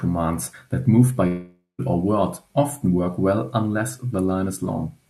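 Speech clip with a long network dropout: after "that move by" at 1.27 s, the sound smears into a fading buzz, goes quiet, then resumes at 1.81 s on "or word often work", with about half a second likely lost in transit.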